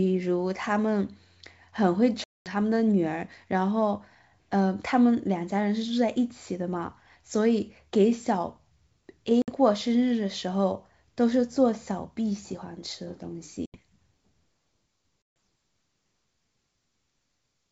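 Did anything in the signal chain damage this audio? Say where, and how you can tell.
Yes: hard-edged silences at 2.24, 9.42, 13.66 and 15.22 s, each followed by briefly distorted speech as the decoder's predictor and step size resettle. This is network packet loss on an ADPCM call.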